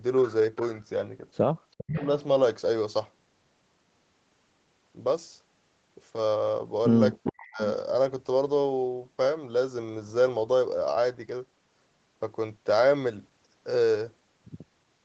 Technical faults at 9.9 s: none

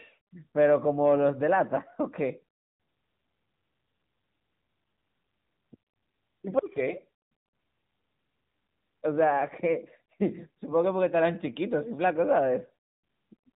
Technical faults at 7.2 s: AMR narrowband mobile codec

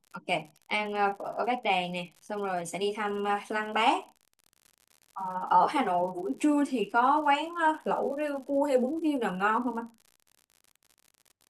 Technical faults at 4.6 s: unreliable data bit

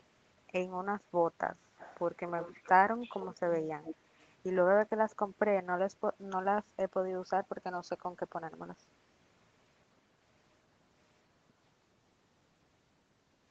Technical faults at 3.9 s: echo leak

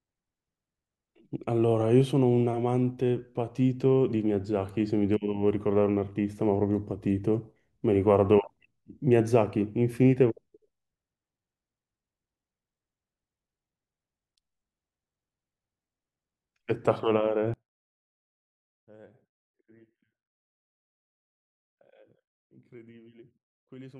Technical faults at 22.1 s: one channel inverted

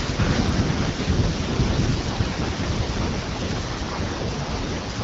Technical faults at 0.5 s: none

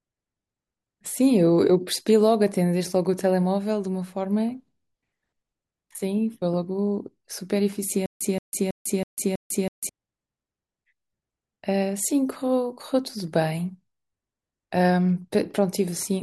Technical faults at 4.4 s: none

